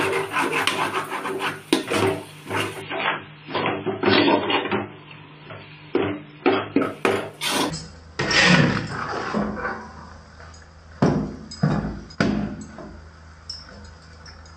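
The audio has two faults. From 2.82 s to 6.82 s, an adaptive stream at a lower bitrate takes over. The quality changes abruptly and codec artefacts rise. This fits the player switching from about 128 kbit/s MP3 to a 16 kbit/s MP3 version. There is no gap at the switch. From 7.70 s to the end, a section plays at the wrong speed. It runs at 0.533 times normal speed, so it drags and sinks about ten semitones in pitch. Speed and pitch drop together, at once. The likely cause is playback against the wrong clock.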